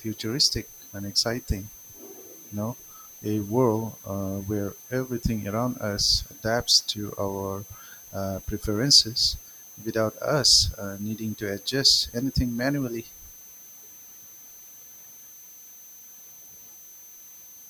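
Running under the speech for the whole clip there's a switching supply whistle, a thin high tone wandering between about 6.1 and 6.3 kHz. A power supply is running in an audible burst mode or beating with another one, sitting roughly 20 dB below the talker.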